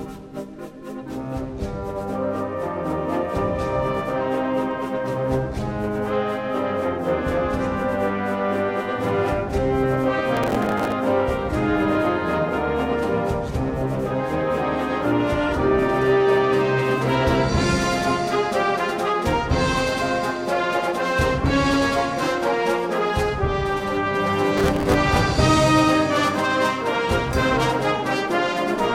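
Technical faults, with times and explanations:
10.37–10.93 s and 24.57–24.94 s: processor overload crackle. Many missed processing deadlines replay stale fragments with hard edges, causing gritty tearing. The spacing fits buffers of around 5 ms.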